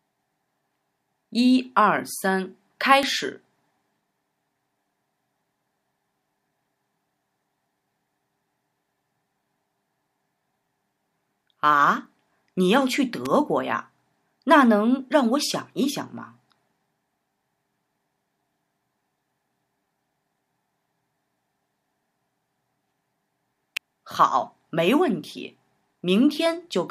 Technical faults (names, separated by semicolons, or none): electrical switching spike